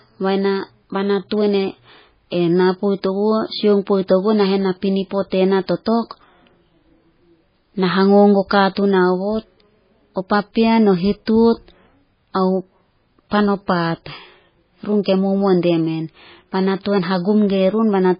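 A speech recording that carries heavy MP3 compression damage from start to finish. All content above about 5.1 kHz is missing, and the speech has a watery, swirling quality, with sibilants turned into metallic chirps. On a spectrogram this shows as a flat ceiling at 5.1 kHz and speckled, flickering patches below it where weak frequency lines drop in and out between frames. The damage likely comes from an encoder starved of bits, which fits a rate around 16 kbps.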